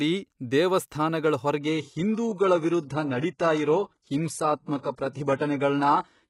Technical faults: adaptive stream at a lower bitrate

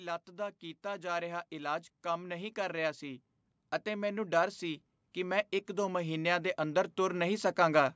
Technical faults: automatic gain rising

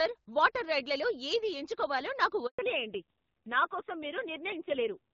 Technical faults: handover gap; fallback to narrowband

